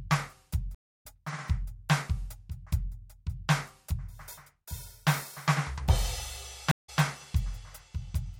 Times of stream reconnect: 0.75-1.03, 6.71-7.01

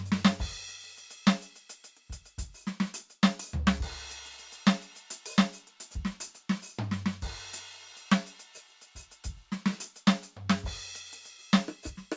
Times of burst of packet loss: none

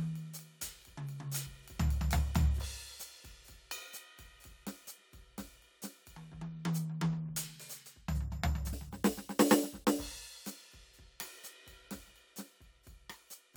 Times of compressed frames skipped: 1.45, 2.64, 8.72

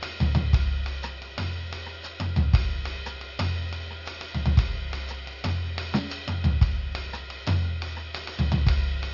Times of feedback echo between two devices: none

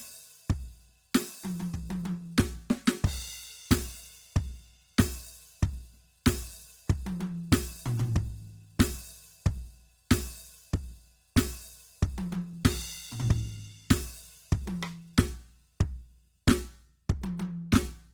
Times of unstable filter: none

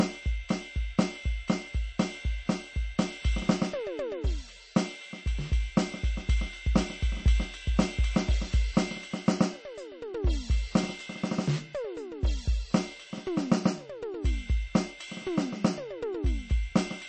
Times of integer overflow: none

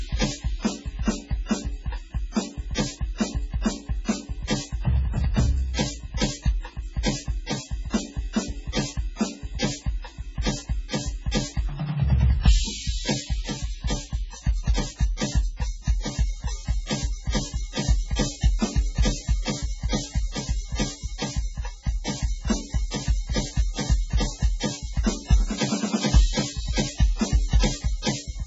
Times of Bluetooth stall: none

